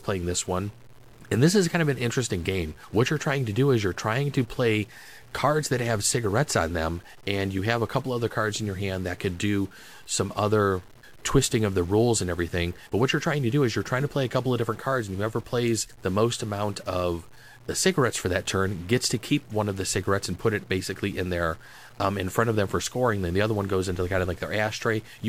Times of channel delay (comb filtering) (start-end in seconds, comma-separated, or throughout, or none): none